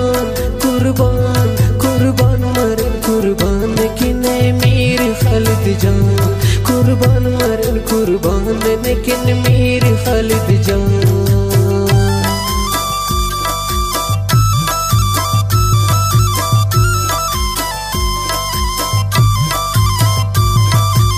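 No technical faults can be heard anywhere in the audio.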